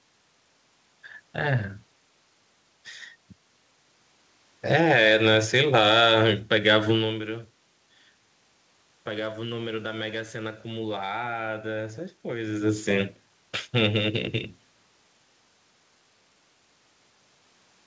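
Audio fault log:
No faults are heard in this speech clip. It has passed through a call codec with nothing above 8 kHz, which fits G.722 wideband coding, and it carries the usual coding noise of that path.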